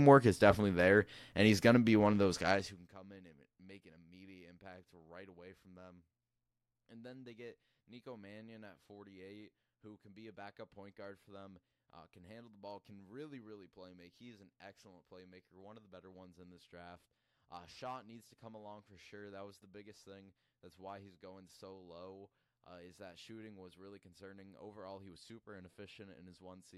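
From 2.47 to 2.95 s, after "be one of those", the level drops by about 25 dB in unsmoothed steps, roughly 150 a second. Each step clicks, producing zipper noise, a fast, buzzy ticking over the speech until "in and make an".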